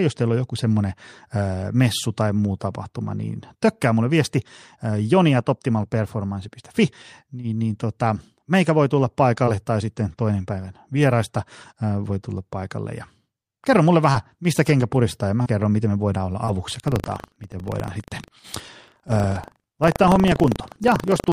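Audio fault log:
9.45–9.57 s, short concealed packet loss: a brief smear or wobble as about 20 ms of audio never arrived and the receiver extended the preceding sound to cover the hole.
9.47, 9.96, 10.00, 10.18, 10.96 and 11.10 s, lost packet rebuilt from error correction: each 20 ms stretch sounds rougher and noisier, played from the low-bitrate backup copy carried in the following packet.
14.12–16.55 s, scattered short gaps: around three small hiccups, the longest about 30 ms, where late or lost packets were patched by continuing the previous sound.
16.68 s to the end, buffer tearing: a steady robotic 25 Hz rattle under the signal, as each buffer splices in a sliver of audio from roughly 70 ms earlier.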